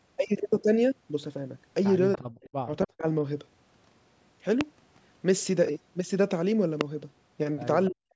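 At 2.13 to 2.19 s a brief echo leak appears, likely from the far end's echo canceller letting part of its loudspeaker pickup back into the line. It is a faint copy of the speech delayed by about 289 ms and sitting roughly 15 dB below the direct sound, heard as a brief scrap. On a spectrogram it shows as a weak, shifted repeat of the harmonic pattern just before, confined like the rest of the clip to below 8 kHz.

Right on its heels, from 2.18 to 2.48 s and again from 2.64 to 3.06 s, the speech is suppressed in double talk. The canceller likely cannot tell the near talker from the echo, so it clamps down on both, and the voice drops out or turns dull and hollow in pieces. The level falls by something like 40 dB at worst, which on the waveform looks like the envelope collapsing abruptly to near silence and then recovering.

Two loud pops follow, at 4.61 to 4.63 s and 6.81 to 6.83 s, single sharp clicks riding on top of speech that carries on underneath. 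They probably come from an electrical transient or driver glitch, peak roughly 20 dB above the signal, and appear as a tall narrow spike on the waveform and a thin full-height vertical stripe on the spectrogram.

Suppression returns from 7.88 to 8.15 s, cutting the final stretch of speech in the same choppy way.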